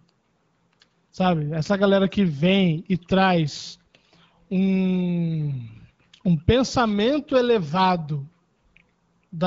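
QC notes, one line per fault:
The speech carries the light, band-limited character of an AMR wideband (HD Voice) codec path, consistent with a rate around 12.65 kbit/s, and no faults are present in the signal.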